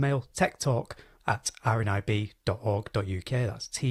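No audible faults in this audio; nothing to flag.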